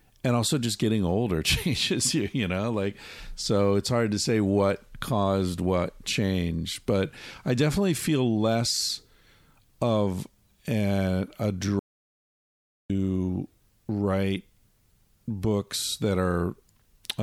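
An audio dropout to silence runs from 11.79 s to 12.90 s, just after "of a a". For about 1.1 s the speech stops dead and the room tone vanishes with it, leaving silence before the sound returns mid-flow. The input signal was likely lost briefly, through a disconnected device, a failed link or a stray mute, while recording carried on writing silence, so whatever was said in that gap is gone.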